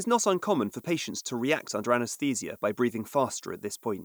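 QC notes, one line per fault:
Throughout: low bit depth with noise shaping. A steady, thin hiss sits roughly 30 dB below the speech and climbs sharply toward the top of the band, which fits a 9-bit signal whose rounding error has been fed back and pushed up in frequency.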